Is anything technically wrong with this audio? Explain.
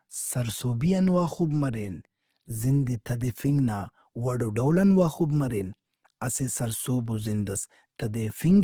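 Yes. Throughout, the speech sounds rough, grainy and noisy rather than swirly, though the bandwidth still reaches about 20.2 kHz. This is likely Opus compression in CELT mode, starved of bits (consistent with about 16 kbps) and filling bands with folded or noise content.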